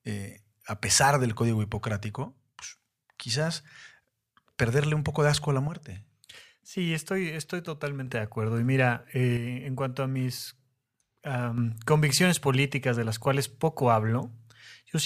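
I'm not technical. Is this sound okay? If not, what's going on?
No. One side of the stereo signal likely cut out for a while, a fault called one channel drops out. The speech suddenly gets quieter, its signal roughly halved, from 2.24 to 2.62 seconds, 5.68 to 8.07 seconds and 9.37 to 11.58 seconds.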